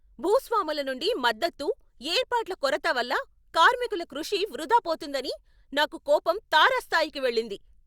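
Nothing in this speech recording stood out as a technical problem on listening.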